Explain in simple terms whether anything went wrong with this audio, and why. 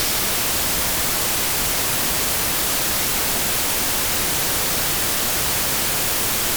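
Listening closely, nothing stood out as having gone wrong with this audio.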